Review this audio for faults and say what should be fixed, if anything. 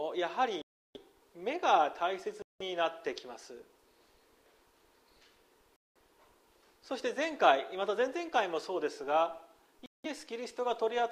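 A Bluetooth stall, likely from interference delaying packets until the headphone buffer ran dry, cuts the sound to silence at 0.62, 2.42, 5.76 and 9.86 s (about 0.33, 0.18, 0.2 and 0.18 s) before it resumes. To prevent it, reduce radio interference and keep the headphones close to the source, or use a wired connection.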